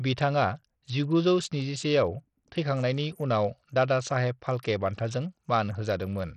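Likely Bluetooth SBC compression throughout the speech: treble flickers and drops out under gritty noise, as a bitrate near 64 kbps starves the upper sub-bands.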